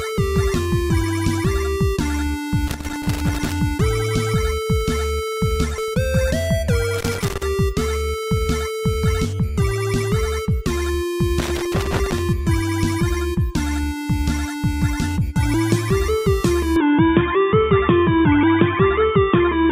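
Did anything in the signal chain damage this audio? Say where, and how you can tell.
Yes. There's loose connector crackle in the analogue wiring, in three irregular bursts from 2.67 to 3.52 s, 6.94 to 7.43 s and 11.39 to 12.19 s. A worn or dirty contact keeps making and breaking, chopping the signal into scratchy crackle.

From 16.76 s to the end, everything above 3.6 kHz disappears and a new noise floor appears about 45 dB down. There's no gap and no real level jump. That points to the input likely being switched to a poorer device, such as a headset's call profile.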